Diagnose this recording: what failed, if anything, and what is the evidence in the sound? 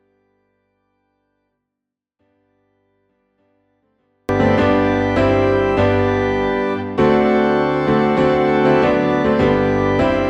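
A 24-bit alignment error at the sample-format conversion stage: 24-bit samples sitting in the low bytes were read as 32-bit, leaving 0 to 4.29 s clean but about 48 dB down.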